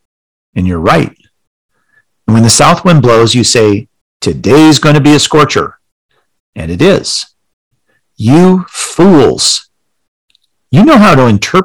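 A stage driven about 12 to 14 dB past its limit cuts the peaks flat. The resulting hard clipping at 0.59–1.03 s, 2.29–3.74 s and 9.00–9.54 s gives the speech a harsh fuzz.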